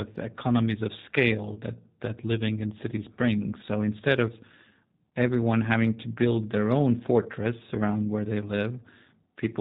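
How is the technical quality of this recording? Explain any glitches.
Technical quality is limited by one fault present from start to finish. The speech sounds slightly rough and synthetic, with nothing above 4 kHz, which points to the G.729 codec at 8 kbit/s. It rebuilds each 10 ms frame from a vocal tract filter, pitch predictor and a few pulses, so the damage is plainly audible.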